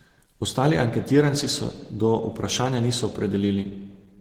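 The speech carries Opus compression damage throughout, sounding muffled, hoarse and grainy, which fits a low bitrate around 16 kbps in the codec's hybrid speech mode. Likely cause: heavy Opus encoding. A spectrogram would show smeared, noise-filled upper bands instead of clean harmonics.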